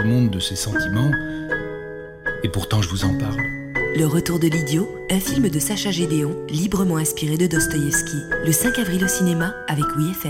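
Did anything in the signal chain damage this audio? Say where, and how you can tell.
No, no signal-chain damage heard.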